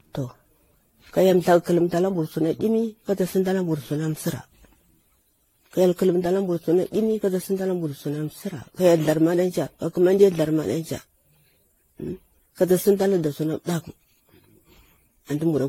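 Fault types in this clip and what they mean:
Generation loss: the speech sounds swirly, smeared and hollow throughout, more degraded than a single 64 kbit/s AAC-LC encode would leave it, with consonant onsets softened and nothing above 16.5 kHz. This likely comes from the audio being decoded and re-encoded around ten times. Each pass requantises on a shifted frame grid, so coding noise and spectral gaps accumulate instead of staying at one pass's level.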